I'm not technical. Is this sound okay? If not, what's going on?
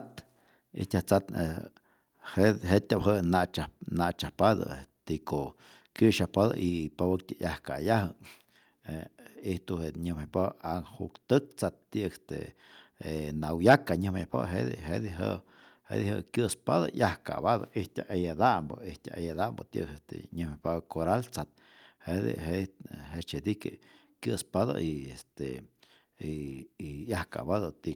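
No. At 13.7 to 13.74 seconds the speech briefly turns harsh and crackly, with the tops of the loudest peaks sheared flat. This is likely microphone overload: the input level was set too high, so the converter could not capture those peaks.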